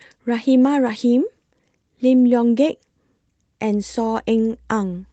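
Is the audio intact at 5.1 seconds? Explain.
No, there's mains hum there. From 3.71 s to the end of the clip, a ground loop or nearby transformer couples the 60 Hz power line into the signal, giving a steady low drone roughly 30 dB under the speech.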